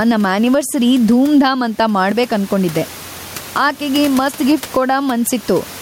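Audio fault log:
Throughout: gain pumping. The gain swings by roughly 15 dB. Loud and quiet passages sit close together, so the speech sounds squashed. The likely cause is input gain set far too high, with a fast limiter or compressor pulling the level down on every loud peak. The room noise itself sits about 29 dB below the speech.
2.12 to 4.52 s: one channel drops out. For these 2.4 seconds the level falls abruptly by about 6 dB and then returns. One stereo channel has likely gone missing for a while before the mono sum. Sound shared by both channels loses half its contribution, which gives the 6 dB drop. Anything carried only in the lost channel vanishes for the duration.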